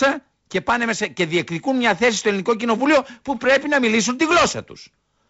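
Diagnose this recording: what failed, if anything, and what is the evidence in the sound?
Nothing failed in this recording, and the speech comes through the wideband telephone coding path with no fault to diagnose.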